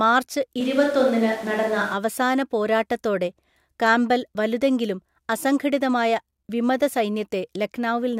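From 0.61 to 1.93 s the speech turns abruptly roomy and hollow, thinner in the bass, with room noise rising to around 25 dB below the voice, though the level barely changes. A switch to a distant microphone is the likely cause. Unlike added reverb or filtering, the shift is sudden both ways and brings in room noise.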